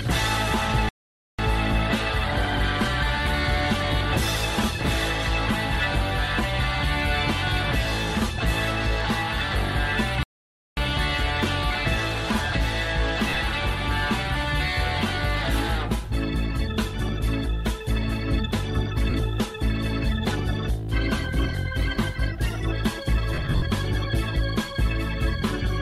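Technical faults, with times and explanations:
0.89–1.39 s and 10.23–10.77 s, playback stall: the sound stops dead mid-flow for about 0.50 s the first time and 0.54 s the second, leaving plain silence before it carries on. That points to the player likely running dry of data or having its output thread held up, so nothing reached the output until it caught up.
13.29–13.37 s, 19.10 s and 23.34–23.62 s, lost LE Audio frames: short stretches of the Bluetooth LE Audio stream went missing, and the LC3 decoder filled each hole by replaying the last good spectrum with scrambled phase. The result is a brief hissy smear instead of clean tone. In the first stretch, 60 ms is lost across 80 ms, with the longest unbroken gap around 40 ms. The second is a single 40 ms hole. The last is the heaviest: 190 ms is missing across 280 ms, with runs up to around 70 ms.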